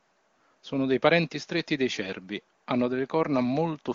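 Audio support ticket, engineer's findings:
No faults found: the speech comes through the AMR wideband (HD Voice) path with nothing to report.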